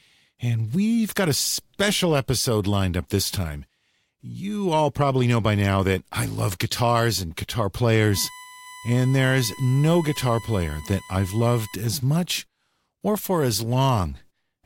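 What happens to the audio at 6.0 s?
Nothing goes wrong at 6.0 s; the speech runs through that moment intact, with no dropout, click or distortion to be heard.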